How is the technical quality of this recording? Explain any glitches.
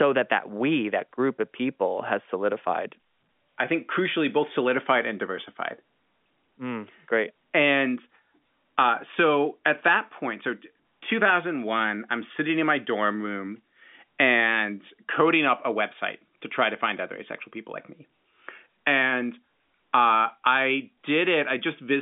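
The speech has no glitches: it arrives as ordinary G.711 A-law telephone audio at 64 kbps, with the line band running from 200 Hz to 3.5 kHz and nothing present above 3.7 kHz.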